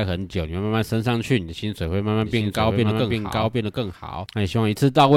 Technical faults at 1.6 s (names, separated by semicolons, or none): none